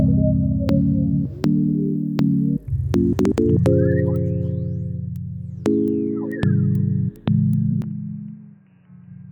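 At 7.82 s the music suddenly turns dull and boxy, losing everything above 3 kHz and dropping around 10 dB, with a faint new noise floor underneath: likely the input switched to a poorer device.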